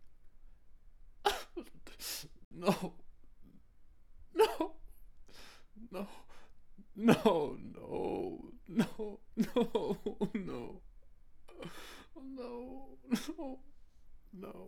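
At 2.45 s the audio cuts out for a brief digital broadcast dropout, returning at 2.52 s. The receiver evidently stopped getting valid data, either losing the signal or rejecting frames that failed their checksum, and muted its output until clean frames arrived again. The hole lasts roughly 64 ms, which fits about two lost frames. The sound that was being transmitted during that gap is gone.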